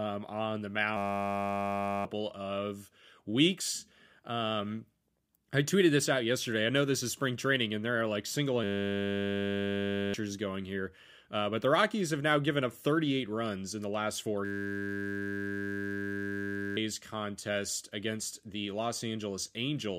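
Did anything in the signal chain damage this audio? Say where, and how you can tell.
Yes, there's a system hang loop at the driver or buffer stage. After "on the" (0.97–2.05 s), "there are like single" (8.64–10.14 s) and "in the last four" (14.45–16.77 s), a 10 ms slice repeats into a steady 100 Hz buzz. The machine froze while the hardware kept cycling its ring buffer.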